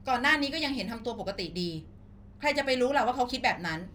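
Crude rate conversion runs throughout the speech, pointing to a jump from 32 kHz to 44.1 kHz by plain linear interpolation without filtering. The repeating interpolation error forms inharmonic tones, roughly 35 dB below the speech, heard as a faint gritty fizz tracking louder and brighter sounds.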